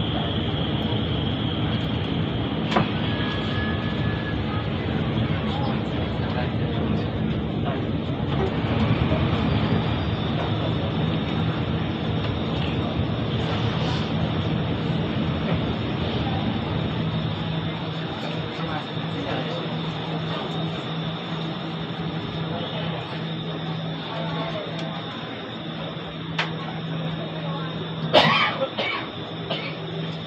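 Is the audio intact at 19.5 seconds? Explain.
Yes, the audio at 19.5 seconds is intact, with no dropout, click, distortion or other fault at that moment.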